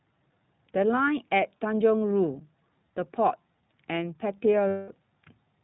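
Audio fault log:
throughout: iLBC codec. The speech is band-limited to narrowband, with nothing above 4 kHz, and carries a plainly audible rough, slightly synthetic texture, which fits iLBC's 15.2 kbps mode with 20 ms frames. Each frame's excitation is coded on its own, so the graininess is steady and evenly spread rather than swirling or warbling like transform-codec artefacts. The rough texture also separates it from simple low-pass filtering, which stays smooth.
4.68 to 4.93 s: lost iLBC frames. For about 220 ms, matching a run of roughly eleven 20 ms frames, the speech becomes a held, buzzy, slightly breathy vowel. Here the decoder keeps repeating the last pitch cycle mixed with noise. Unlike a dropout, there is sound rather than silence. Unlike concealment in codecs that carry state between frames, normal speech returns almost immediately afterward with no lingering smear.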